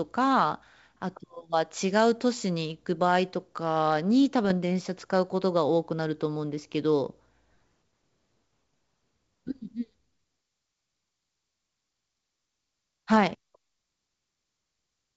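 From 4.45 to 4.53 s the speech breaks into a short cluster of pops and a rough, gritty burst, with the level briefly jumping and dipping. These are bit errors on an ADPCM link. Each flipped bit throws off the decoder's step size and prediction, so the damage smears on for several milliseconds instead of staying a single click. The rate is low, around a tenth of a percent. The wideband G.722 coding itself stays clean.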